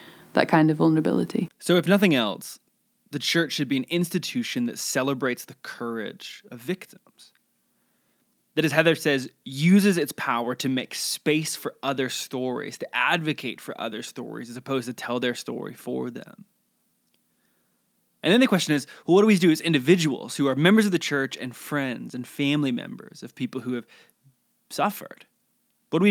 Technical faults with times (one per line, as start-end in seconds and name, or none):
none